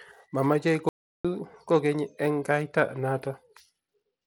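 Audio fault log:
throughout, Bluetooth SBC compression: The speech has most likely passed through a Bluetooth link using the SBC codec on a tight bit budget, which fits roughly 96 kbps. Starved upper sub-bands get few bits, so treble flickers and drops out while coarse quantisation leaves plainly audible grit and aliasing.
0.89–1.25 s, audio dropout to silence: The input feed was lost for about 0.36 s, probably a failed link or disconnect, while recording continued writing silence. The speech cuts off abruptly into silence, with no room tone, then resumes mid-flow, so that stretch is missing.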